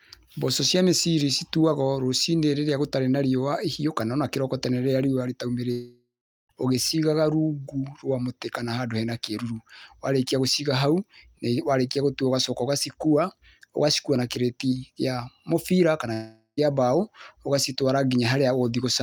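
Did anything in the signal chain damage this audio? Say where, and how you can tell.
Yes. Long network dropouts, at 5.71–6.51 s and 16.13–16.59 s, likely in the network stage. Each gap starts as a fading buzz extending the last sound and ends in silence (about 0.39 s, then 0.06 s). Speech resumes with 0.78 s and 0.44 s gone.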